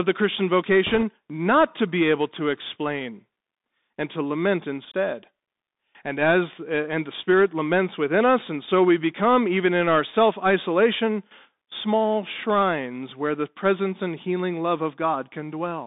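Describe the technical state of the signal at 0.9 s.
At 0.9 s, bit errors on a Bluetooth voice link are active, from 0.87 to 1.03 s, just before "not to be able". Flipped bits in the headset stream each nudge the reconstructed waveform only one small step, and the adaptive decoder quickly recovers, so the damage is a short rushing, crackly noise over the speech rather than sharp clicks. That distinguishes it from packet loss or digital dropouts, which produce gaps or loud pops. The density of the crackle suggests an error rate of around two percent.

Underneath this, the Bluetooth CVSD headset codec is present through the whole clip. The speech sits in a telephone band of about 250 Hz to 3.7 kHz, with a granular hiss, scratchy s sounds, and distortion where loud high energy outruns the codec's adaptive step. This fits a 64 kbit/s one-bit delta stream. Unlike an ordinary low-pass filter or a heavy MP3, the roughness is a fine, slope-limited grit that follows the speech rather than metallic swirling.

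A block size mismatch (truncated) is also present throughout. A steady buzz at 46.9 Hz comes from the end of each block being discarded, which fits 1024-sample blocks at 48 kHz. The audio runs at about its normal speed and pitch. A periodic buzz at the block rate, rather than hum at 50 or 60 Hz and its harmonics, marks it as a buffer-boundary fault and not mains interference.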